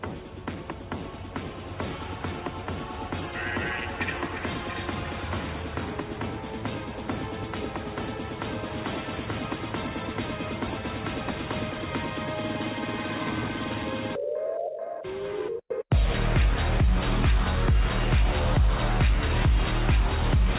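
No technical faults can be heard in this audio.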